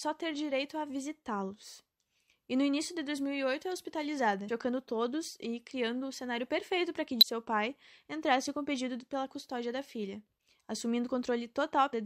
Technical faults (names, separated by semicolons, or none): damaged data in a compressed stream